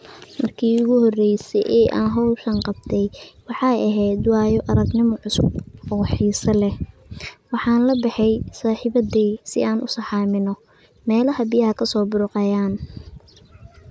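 Nothing here trips any alarm: the speech runs along without a single technical fault turning up at any point.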